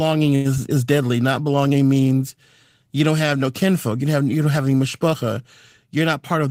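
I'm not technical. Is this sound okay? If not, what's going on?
No, there are three small glitches.

From 0.35 to 0.47 s there is a short stall from a late packet. A piece of the call arrived late. The phone held the last sound for about a tenth of a second while it waited. Then it carried on where it left off. Nothing is lost, but one sound drags.

Around 0.55 s there is a short concealed packet loss. About 20 ms of audio never arrived. The phone covered the gap by extending the sound just before it. You may hear a tiny smear or wobble, and a quick sound could be missing.

From 5.96 to 6.48 s, just after "don't have any mishpacha", there is a jitter buffer speed-up. Too much audio had piled up waiting. The phone trimmed tiny slices, about 40 ms in total, to catch up. The speech runs about 7% faster, with no change in pitch.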